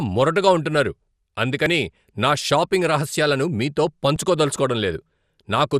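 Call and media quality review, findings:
Dull, gurgling, granular speech, whole clip. Likely MP2 compression at a low rate, roughly 80 kbps: upper sub-bands starved of bits, switched off, flickering. Spectrogram: hard ceiling at 14.3 kHz, patchy blocky high bands flickering on and off.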